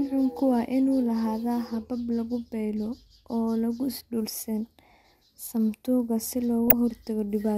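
Right after "samatuka si", from about 6.68 to 6.73 s, there's a short burst of DAB burbling in this speech clip, roughly 50 ms long. Reception was weak, with a bit error rate of a small fraction of a percent, and errors got past the error correction into the MP2 data. Corrupted samples put short blips of noise in individual sub-bands. Four frames were hit.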